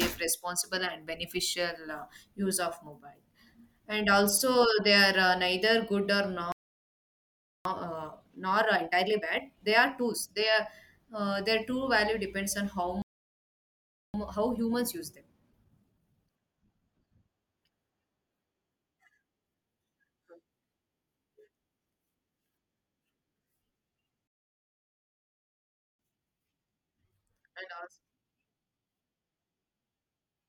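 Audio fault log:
6.52–7.65 s, 13.02–14.14 s and 24.27–25.99 s, playback stall: The player most likely ran dry of buffered data or had its output thread blocked, so nothing reached the output until it recovered. The speech cuts off abruptly in mid-flow and the output is completely silent for about 1.13 s, then 1.12 s, then a longer 1.72 s.
7.65–10.65 s, 14.14–17.14 s and 25.99–28.99 s, time-compressed catch-up: After each stall the player works off its backlog by cutting small slices out of the signal and cross-fading the remaining pieces together. This avoids resampling, so the speech stays at its normal pitch but runs hurried for three seconds. It runs 1.25 times normal speed in the first and last stretches and 1.15 times in the middle one.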